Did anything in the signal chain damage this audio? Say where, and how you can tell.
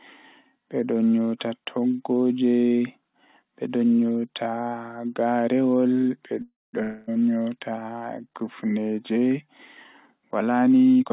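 Yes. At 6.42 to 6.75 s, a call audio freeze, likely a late-packet stall in the jitter buffer, stretches the last sound into a fading buzz, then about 200 ms of silence. Speech resumes intact.

At 6.83 to 7.11 s, a long network dropout, likely lost packets, leaves a decaying buzz, and when speech returns about 240 ms of it is gone.

From 11.00 s to the end, a jitter buffer speed-up trims pitch periods, about a tenth of a second in total, so speech runs at 160% with unchanged pitch through the G.711 path's narrowband sound.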